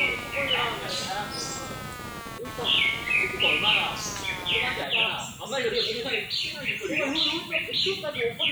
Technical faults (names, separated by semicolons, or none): computer activity noise